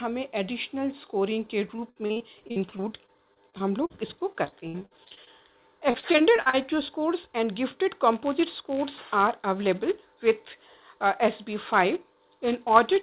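From 1.76 to 5.28 s, and again from 5.90 to 6.66 s, the audio turns choppy: repeated packet loss (robotic sound). Short holes follow one another every fraction of a second, each patched by stretching the previous fragment, with the longest gaps about 58 ms and 37 ms. Roughly a fifth to a quarter of each stretch is concealed. Unlike a single dropout, the damage is a dense run of small gaps.

From 8.13 s to the end, a steady buzz at 188 Hz rides on the sound. This is a filter restarted on every block: it loses its memory at each block boundary and restarts from silence, putting a small transient at every block start. The rate fits a 256-sample block. Mains hum sits at a fixed 50 or 60 Hz and holds its level, but this buzz swells and fades with the signal. Throughout, nothing is heard above 4 kHz, consistent with a G.711 telephone-band call path.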